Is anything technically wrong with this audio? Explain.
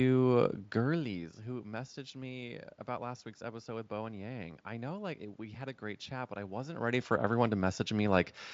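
No, nothing is technically wrong.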